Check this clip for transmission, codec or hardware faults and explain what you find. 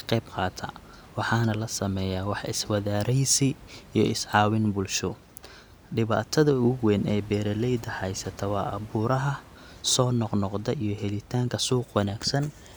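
Nothing in the signal chain stands out as faulty: the speech carries through intact, with only the recording room's own background noise sitting about 23 dB beneath it as part of the original capture.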